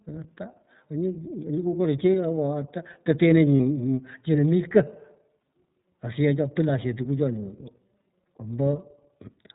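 The whole clip carries the sound of the iLBC codec. The speech is narrowband, with nothing above 4 kHz. It sounds clear but slightly rough and synthetic, and the codec damage is plainly audible. This codec codes each frame on its own, without leaning on the previous one. The rough texture fits its 13.33 kbps mode with 30 ms frames. The missing top end gives the audio a telephone-like dullness.

At 3.58 to 3.60 s there is a brief lost iLBC frame. The gap fits a single missing 30 ms frame. The decoder fills it by repeating the last pitch cycle blended with noise. It sounds like a short held, faintly buzzy vowel rather than silence. Each iLBC frame stands alone, so the speech recovers almost at once after the gap.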